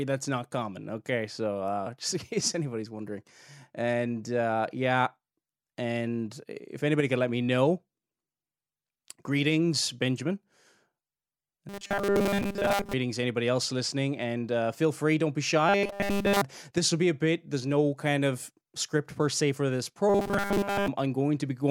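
New audio likely arrived too seldom, so playback looped roughly 5 ms slices in its place, causing robotic sound from repeated short buffers. The speech becomes a rigid metallic 200 Hz buzz: mostly from 11.69 to 12.94 s, before "anybody else listening and"; entirely from 15.69 to 16.41 s, between "feel free don't be" and "this will be a"; and mostly from 20.09 to 20.88 s, after "per se for this".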